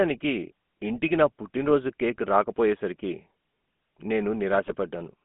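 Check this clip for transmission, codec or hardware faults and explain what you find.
Two faults are present: a GSM full-rate codec across the whole recording and two bursts of GSM bit errors.

The speech has a buzzy, gravelly roughness from start to finish, confined to roughly 200 Hz to 3.4 kHz. That is the GSM full-rate codec, which models the vocal tract and feeds it a sparse, regularly spaced pulse excitation, consistent with a 13 kbps GSM stream.

At 1.05 to 1.10 s, just before "నా పుట్టినరోజు కేక్ రాకపోయేసరికి", and again at 4.66 to 4.91 s, the speech breaks into brief squawks and gargling pops. These are GSM bit errors. Corrupted filter, pitch or gain values reach the decoder, which warps the spectrum and throws the level off for a few frames.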